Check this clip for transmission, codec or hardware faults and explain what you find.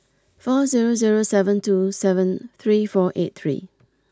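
Nothing wrong turns up here; the speech comes across with no faults to point to.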